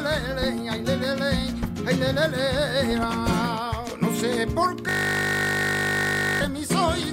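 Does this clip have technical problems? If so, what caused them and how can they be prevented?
Yes. A system hang loop from 4.89 to 6.41 s: the system froze while the audio hardware kept replaying one 20 ms buffer, producing a steady 50 Hz buzz. Preventing it requires fixing the driver or system stall and having the audio path mute or stop on underrun rather than recycling the buffer.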